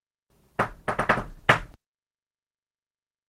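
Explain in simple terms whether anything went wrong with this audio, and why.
Nothing went wrong here.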